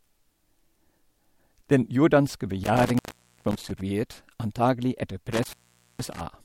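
At 2.64 to 3.81 s and again at 5.32 to 6.21 s, the speech cuts out from an intermittent contact, a loose plug or cable briefly losing connection. Each gap lasts about 0.47 s, framed by crackle as the contact breaks and remakes, with faint hiss while the line is open. That scratchy edge and residual hiss distinguish it from a digital dropout, which falls to clean silence with abrupt, crackle-free boundaries.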